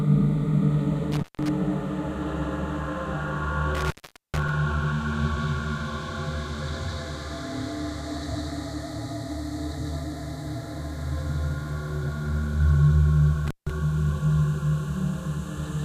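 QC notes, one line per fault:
1.12–1.49 s, 3.75–4.49 s and 13.47–13.70 s: intermittent contact, three times. The sound drops out or breaks up, with crackle where the connection opens and closes, and hiss remains while it is open. The open stretches last about 155 ms, 435 ms and 160 ms, so the middle one is the longest. A loose cable or plug is briefly breaking the signal path and then reconnecting, and the ragged contact at each edge causes the crackle.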